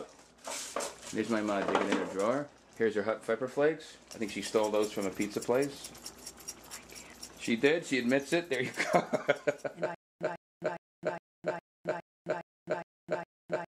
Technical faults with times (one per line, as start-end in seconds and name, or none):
9.95-13.75 stutter with silent gaps